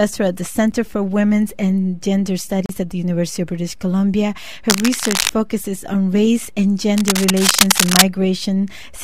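A block of digital silence at 0.71 s and another from 2.66 to 2.69 s drop the sound abruptly to zero, with no fade in or out. The missing samples point to output buffers that were not filled in time. The first gap lasts under 7 ms and registers as a sharp tick. The second, about 35 ms long, opens a brief audible hole.

Cable scratch noise runs from 4.68 to 5.33 s and again from 6.97 to 8.03 s. Dense, irregular bursts of scratching and rustling ride over the sound at roughly the same level as the sound itself. The likely cause is a worn cable, connector or control being moved, so that its contact resistance fluctuates rapidly and injects uneven noise into the signal for as long as the movement lasts.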